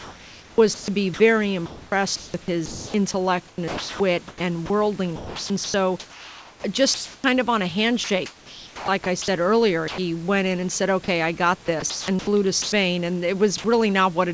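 From 0.0 to 2.94 s the sound is chopped by the voice detector: about 1.5 s of quiet passages are swapped for comfort noise, likely because the sender's detector kept toggling transmission. The same choppy pattern recurs from 3.48 to 7.24 s (just before "of on a", about 1.96 s replaced) and from 8.04 to 9.28 s (after "of on a", 0.74 s replaced).

At 9.88 s the sound is dropped by the voice detector for 100 ms. About 80 ms of audio is lost to steady comfort noise, likely a low-level tail misread as background.

The chopping returns from 11.66 to 12.72 s after "I got", with 0.4 s filled.

A second drop at 13.58 s loses 50 ms inside a 60 ms noise fill.

Nothing is heard above 8 kHz, consistent with a wideband call codec such as G.722.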